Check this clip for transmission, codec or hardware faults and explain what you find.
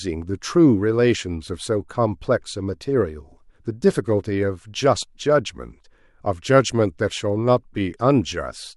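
One fault is present in the speech. CD scratch ticks, 4.68 to 5.2 s: a blemish beats error correction once per disc turn, leaving four brief, regular concealment clicks of about a millisecond at most.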